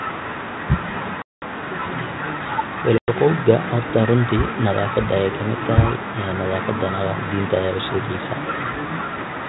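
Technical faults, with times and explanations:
1.22–1.43 s and 2.98–3.14 s, packet loss on an ADPCM call: sharp silent holes of 200 and 100 ms, then slightly distorted speech as the decoder's predictor resyncs.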